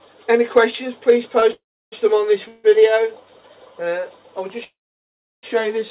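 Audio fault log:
1.40–1.44 s, short stall from a late packet: a packet missed its playout time and the jitter buffer briefly ran dry, so the receiver stretched the last sound by 18 ms, holding it with a faint buzz or dip before carrying on from the same point. Nothing is lost, and playback runs 18 ms later afterwards.
1.52–1.94 s, 2.48–2.66 s and 4.64–5.45 s, call audio freeze: packets were likely held up in transit, emptying the jitter buffer each time, so the receiver filled 401 ms, 159 ms and 788 ms respectively with a fading continuation of the last sound. In the first and third gaps this decays into 320 ms and 700 ms of silence, while the second stays a brief buzz or hiss. When the packets arrive, the audio resumes where it stopped, so nothing is missing but delay accumulates, all within telephone-band sound that has nothing above 4 kHz, which fits a G.711-style codec.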